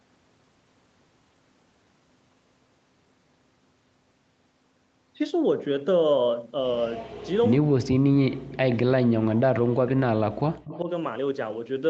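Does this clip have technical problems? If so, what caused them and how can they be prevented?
Yes. Between 6.81 and 7.52 s, and again briefly at 8.70 to 8.75 s and 10.68 to 10.79 s, a faint copy of the speech trails the original by about 127 ms, sitting about 20 dB below it (about 25 dB at the last spot). This is echo leak, likely from a far end on a loudspeaker whose echo canceller let part of the returning signal through, so the talker's own audio comes back delayed. Prevent it with headsets or a better-converged, properly tuned echo canceller at the loudspeaker end.

From 7.6 to 10.88 s the speech repeatedly sinks and breaks up, for roughly 3 s in total, with the deepest dips reaching around 40 dB. This is speech suppressed in double talk. With both sides likely active at once, the canceller probably could not tell the local talker from the loudspeaker echo and attenuated everything, so stretches of the talker vanish. 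The short echo bursts inside this span show the same canceller struggling. Prevent it with an echo canceller that handles double talk better and with less aggressive residual suppression.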